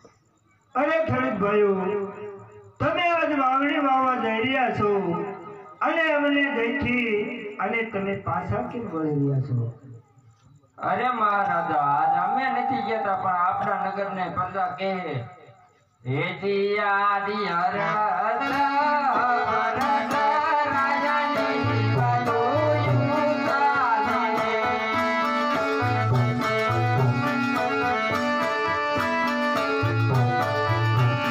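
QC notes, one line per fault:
0.12–31.31 s, clock slip clicks: a fine, even rattle of tiny ticks runs nearly the whole length, roughly fifty per second, around fifteen hundred in all, each a single-sample jump in the waveform. The likely cause is two devices running on unsynchronised clocks about 0.1% apart, so their drift reaches a whole sample every fiftieth of a second and one sample is dropped or repeated at that steady rate.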